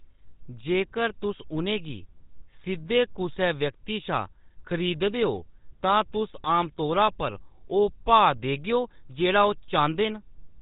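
A speech recording carried entirely through the GSM full-rate codec, with plainly audible damage. The voice has the codec's buzzy, gravelly roughness: the excitation is rebuilt from sparse, regularly spaced pulses and shaped by a vocal-tract filter, a texture that fits the 13 kbps full-rate scheme. On a spectrogram the energy stops abruptly at 4 kHz with nothing above, and the harmonics look coarse and grainy rather than clean. Between 5.85 and 5.93 s there are GSM bit errors. Corrupted filter, pitch or gain parameters make the voice break into a short squawk and gargle for that span, which points to a few consecutive damaged frames. On the spectrogram it appears as a brief block where the formant bands bend or smear into unnatural shapes.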